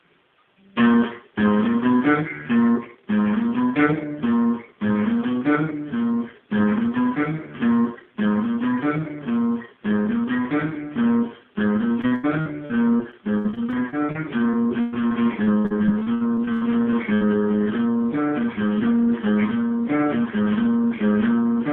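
From 12.01 to 17.23 s there is repeated packet loss, which gives a robotic sound. Dozens of short holes appear, the longest about 114 ms. Each is patched by stretching the last sound, so about a fifth of that stretch is filled-in sound, choppy.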